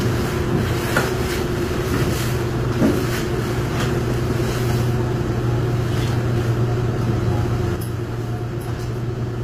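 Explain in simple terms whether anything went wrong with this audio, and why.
HE-AAC compression runs through the whole clip and is plainly audible, with nothing above about 15.4 kHz. The likely cause is this codec: it keeps the lower range and fakes the treble by copying lower sound upward, so the highs turn gritty and metallic.

A sudden gain jump at 7.76 s drops the sound and its background noise together to a lower level, which holds to the end at 9.43 s. It happens in a single instant with no fade, as when a volume setting is applied without any smoothing.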